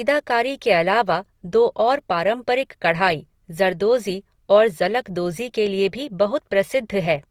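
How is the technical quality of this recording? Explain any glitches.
The recording carries plainly audible codec damage from start to finish. The likely cause is Opus compression in its music (CELT) mode, at a low bitrate that fits around 24 kbps. With too few bits, the encoder keeps each band's energy but fills the detail with folded or noise content, so the speech sounds rough, grainy and noisy rather than swirly, with nothing above about 19.3 kHz.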